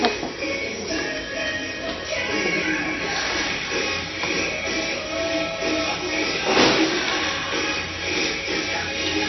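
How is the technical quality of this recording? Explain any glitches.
Technical quality is poor, with plainly audible compression damage throughout. MP3 compression is the likely cause, with everything above 5.9 kHz gone. Starved weak frequency lines flicker between frames, giving watery, swirly artefacts. A spectrogram shows a hard ceiling and speckled gaps, which points to a very low bitrate, around 30 kbps.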